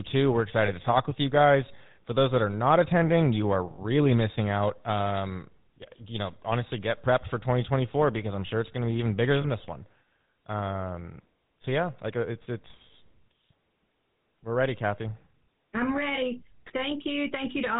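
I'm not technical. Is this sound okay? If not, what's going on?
No. The speech sounds buzzy and gravelly throughout, like an old mobile call. That's the GSM full-rate codec, an early phone compression method that discards the crisp high sounds.

There are also brief metallic, ringing hiccups at about 0.66, 3.74, 9.42 and 12.92 seconds. These are lost GSM frames: tiny pieces went missing, and the phone filled each gap by repeating the sound just before it.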